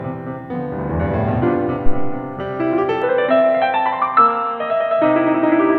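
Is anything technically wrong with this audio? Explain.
Yes. From 3.02 s to the end, the input was likely switched to a poorer device. The music suddenly turns dull and boxy, with nothing above 4 kHz, because the new input passes a much narrower band. A faint new background hiss also appears, far below the music. On a spectrogram, the upper band goes empty at a hard ceiling of 4 kHz from 3.02 s. The waveform shows no gap at the switch and no clear change in level.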